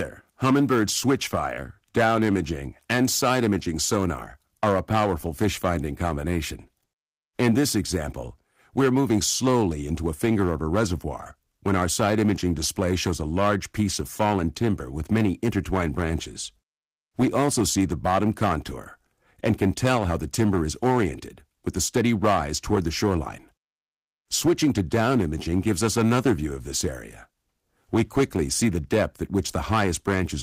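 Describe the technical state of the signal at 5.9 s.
At 5.9 s the signal is hard clipped, as it is across the whole clip. The level is pushed about 12 dB beyond what the signal path can carry, so the peaks are sheared flat at the ceiling. Only a small fraction of samples, around 3 percent, actually hit that limit. The squared-off tops generate harmonics high up the spectrum, heard as a harsh, gritty fuzz riding on the louder moments of the sound.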